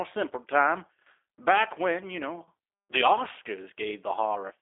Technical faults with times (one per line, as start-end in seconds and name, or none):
0.00-4.62 G.729 codec